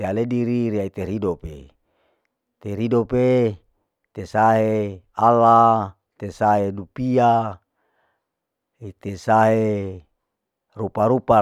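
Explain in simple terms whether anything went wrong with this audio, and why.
At about 1.40 s, the playback chain dropped a tiny chunk of this speech, under a millisecond long (a size that fits a 32-sample block), and replaced it with silence. That block of digital silence is too short to hear as a gap. The instant cut to nothing and back is heard as a tick or dip.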